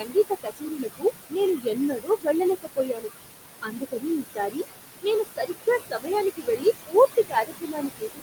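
Noise suppressor artifacts run through the whole clip. The suppressor pulls the room noise, which sits only about 6 dB under the speech, down by about 19 dB. The noise sinks in the gaps and swells under the speech.

Speech cut by the noise suppressor appears four times. From 0.0 to 2.27 s, about a second of speech drops by up to about 19 dB. From 2.62 to 3.1 s, roughly a third of a second falls by up to about 20 dB. From 3.62 to 4.66 s, under a second dips by up to about 17 dB. From 5.02 s to the end, parts fall by up to about 20 dB. The suppressor mistakes soft speech for noise, so endings and quiet stretches sound swallowed.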